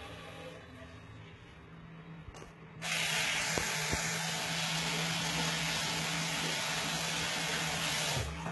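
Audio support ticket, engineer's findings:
Gritty, metallic top end throughout, nothing above 11.8 kHz; likely HE-AAC compression, treble rebuilt by band replication from copied lower bands, heavy damage pointing to roughly 16 kbps.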